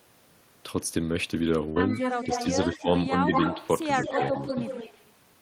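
A speech recording with three kinds of trouble. From 1.69 to 1.79 s the sound freezes into a short held sound that fades, then picks up further along. That is a burst of packet loss: about 65 ms was concealed by stretching and fading the last audio, and about 60 ms of the talk never arrives. Delayed copies of the voice trail behind it from 1.91 to 2.47 s (146 ms behind, about 5 dB quieter), 3.28 to 3.67 s (169 ms behind, roughly as loud as the direct voice) and 4.04 to 5.11 s (169 ms behind, about 5 dB down). These are an echo leak, likely from a far-end loudspeaker whose echo canceller let its own playback back into the microphone. Between 2.70 and 2.87 s the voice briefly sinks by roughly 10 dB for about 150 ms, which is speech suppressed in double talk, likely the canceller ducking everything while both sides spoke at once.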